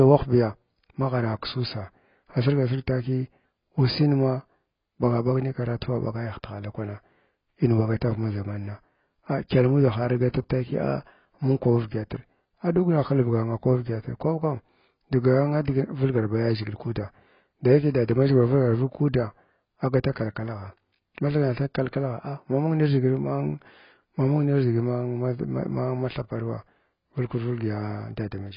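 Heavy AAC compression is the likely cause, running throughout: the encoder has had too few bits, which fits a bitrate near 16 kbps. It discards everything above about 5.2 kHz, leaving the speech dull and muffled, with a smeared, warbling, fizzy edge on sibilants and held sounds.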